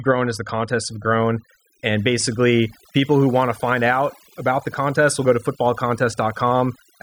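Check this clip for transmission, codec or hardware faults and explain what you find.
One fault runs through the whole speech clip: overdone noise removal. Bands near the noise estimate are cut away, leaving a lowered background broken into twinkling specks.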